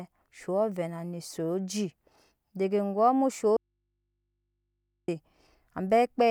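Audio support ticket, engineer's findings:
Audio dropout to a faint residue, 3.57 s to 5.08 s. Speech cuts out abruptly for about 1.5 s, then returns mid-flow. Gap holds only mains hum, around 55 dB below the speech. Likely cause: upstream source or cable connection lost while the input stage stayed live, so the open input picked up hum. Not a pause or fade. Check connectors and the source feed.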